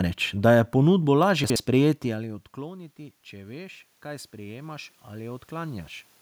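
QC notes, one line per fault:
1.44–1.56 s, chunks out of order: just after "da je ponudbo" the audio turns briefly jumbled. A 60 ms block of sound plays one block later than it should, so the block meant to follow it is heard first. Nothing is missing, but the order is swapped, leaving three hard joins where the waveform jumps. Those joins make the moment sound scrambled rather than cut.
2.03–5.95 s, automatic gain rising: around 2 s the talker moves away from the microphone, and the level reaching the input falls by about 20 dB. The automatic gain control responds by raising its gain gradually, by about 11 dB over nearly four seconds, so the voice and the room noise swell together. The boost is smaller than the drop, so the voice still ends quieter than before, with the background noise rising beneath it.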